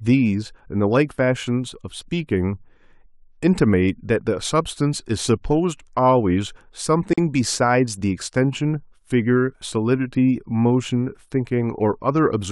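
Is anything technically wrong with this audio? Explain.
Yes. At 7.13 s the speech drops out for about 43 ms, ending at 7.18 s: a brief hole with edges smeared by the codec, after which the sound resumes exactly where it left off. This is a gap at a join of encoded pieces. The audio was encoded in separate sections and joined without trimming, so the encoder's silent start-up delay and the padding on the previous section's last frame both remain at the seam.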